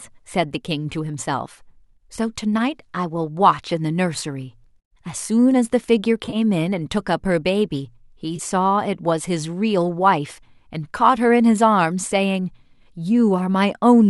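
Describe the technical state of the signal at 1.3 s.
At 1.3 s the speech is intact, with no fault at that moment.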